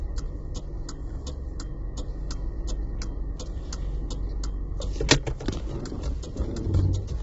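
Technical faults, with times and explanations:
Throughout: low-delay AAC compression. The sound is heavily damaged, rough and grainy, with a noisy fill where clean tonal detail should sit. Nothing remains above 7.7 kHz, so the top end is cut off and dull. The likely cause is AAC-ELD, the low-delay coder built for calls. Its short frames resolve harmonic structure poorly and spend bits fast. The damage fits a low rate near 16 kbps, leaving too few bits for fine detail and high frequencies.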